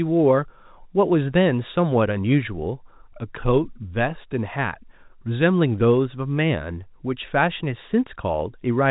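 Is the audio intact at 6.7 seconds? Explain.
Yes, the audio is intact at 6.7 seconds, with no fault there beyond the normal narrow band of G.711 telephone coding, which cuts everything above 3.8 kHz.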